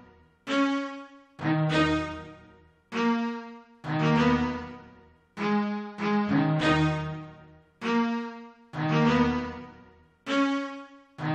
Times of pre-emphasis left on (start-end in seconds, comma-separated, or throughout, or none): none